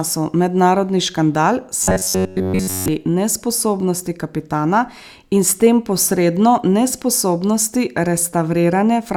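From 1.83 to 2.88 s, robotic sound from repeated short buffers turns the speech into a rigid, metallic buzz at 93.8 Hz. The likely cause is a roughly 10.7 ms chunk looping throughout. The waveform shows identical repeating cycles, and the spectrogram shows flat, evenly spaced harmonic stripes.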